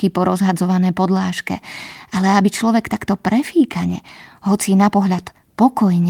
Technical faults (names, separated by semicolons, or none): none